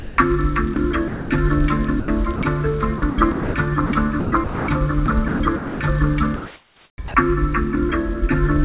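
From the very start, 0.00 to 0.18 s, the sender's voice detector likely judged the opening sound to be background and stopped sending, so the receiver filled about 180 ms with comfort noise. That is sound dropped by the voice detector: roughly 150 ms of real sound is lost, and the clip opens on comfort noise before the actual audio cuts in once the detector triggers.

The same detector then repeatedly toggled between sending and muting, likely misreading quieter parts of the signal as background. This is sound chopped by the voice detector, in four stretches: 0.74 to 1.3 s with about 240 ms replaced, 2.0 to 2.42 s with about 140 ms replaced, 2.98 to 5.8 s with about 1.1 s replaced, and 6.36 to 7.14 s with about 680 ms replaced. In each, fragments of sound vanish into comfort noise, leaving a choppy, stuttering result. The long middle stretch loses the most sound in total. Throughout, the narrowband call path leaves nothing above 4 kHz, consistent with G.711 mu-law.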